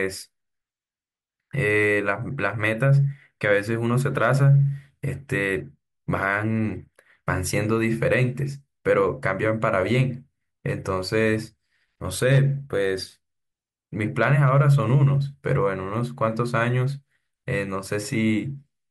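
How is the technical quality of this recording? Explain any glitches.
Nothing here gives me anything to flag, since the speech runs along without a single glitch worth pointing out.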